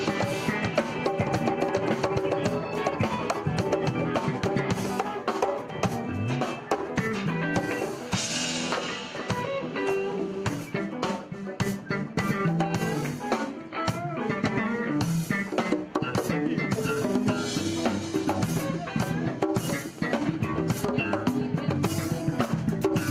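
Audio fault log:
There is no fault in this audio.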